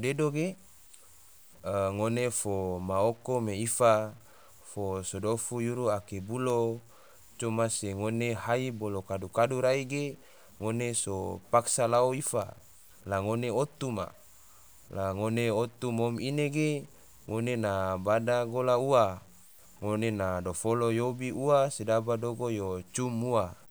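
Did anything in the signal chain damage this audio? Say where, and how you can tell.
Yes. Low bit depth without dither runs through the whole speech clip: grainy distortion rides on the speech and grows harsher as the speech gets quieter, about 30 dB below the level. The likely cause is truncation to about 8 bits during sample-format conversion, so the error tracks the signal.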